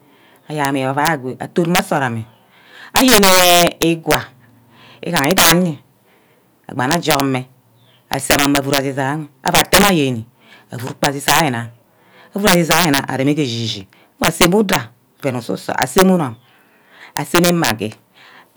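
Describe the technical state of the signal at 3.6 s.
Integer overflow is present at 3.6 s, as it is across the whole clip. The speech is driven about 12 dB too hot into an integer path that wraps instead of limiting. Any peak that crosses full scale flips to the opposite extreme, jumping across the entire range in a single sample. Under one percent of samples are affected, but on the loudest syllables each wrap lands as a violent, brittle crack, far harsher than ordinary clipping.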